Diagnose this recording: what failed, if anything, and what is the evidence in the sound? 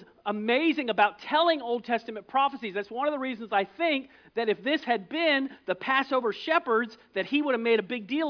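Nothing in this one points to a failure at any stage, so there's no fault to diagnose here.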